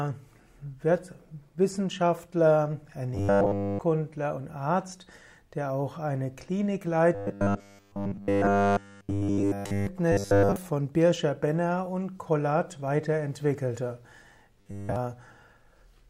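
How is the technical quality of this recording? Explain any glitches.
The recording is marred by four episodes of robotic sound from repeated short buffers, at 3.15 to 3.79 s, 7.15 to 9.87 s, 10.12 to 10.56 s and 14.61 to 14.96 s. Each turns the audio into a rigid, metallic 100 Hz buzz. The likely cause is audio arriving too slowly, so playback loops a fragment of about 10 ms, which sets that 100 Hz pitch. The first three stretches are completely replaced this way, and the last one mostly.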